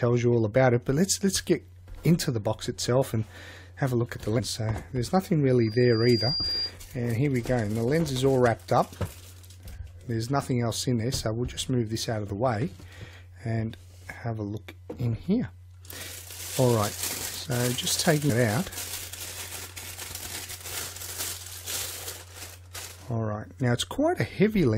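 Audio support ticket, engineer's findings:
Damaged data in a compressed stream: short glitch at 4.38–4.40 s, another blip at 18.29 s. Looks like corrupt bytes in the file or stream. Decoder chokes on those frames, loses sync, hunts for the next header.

Loudspeaker feedback squeal at 5.60–6.74 s: single 4.8 kHz tone swelling over roughly three-quarters of a second, peaking at about the level of the programme. Mic is hearing its own speaker and loop gain tops one at that frequency. Check mic placement and monitor level.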